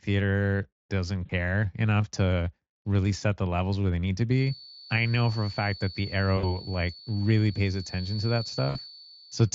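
Speech with two distinct faults. VoIP packet loss concealed by the speech codec hits at 1.25–1.31 s, just before "enough to really set", then at 6.37–6.59 s and 8.69–8.78 s. Rather than clean silent dropouts, the voice smears into a buzzy tone or coloured noise that fades and stays weak briefly afterwards, which fits two or three lost 20 ms frames. From 4.27 s, right after "where they need to", a feedback whistle holds a thin, slowly swelling and fading 4.5 kHz tone well beneath the speech to the end, likely a loudspeaker-to-microphone loop sitting at the edge of howl. It is a single pitched line, not an artifact of the light Speex coding.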